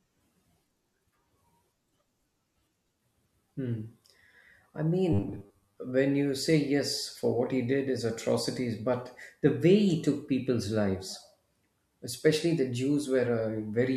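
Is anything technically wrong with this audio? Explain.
Yes. From 5.13 to 5.78 s, just before "when you say yes", there is robotic sound from repeated short buffers. The likely cause is audio arriving too seldom, so the playback side loops the most recent fragment of roughly 10 ms, with about half the material repeated instead of fresh. That period stamps a fixed 100 Hz buzz onto the speech, turning it rigid and metallic while it still loosely tracks the words.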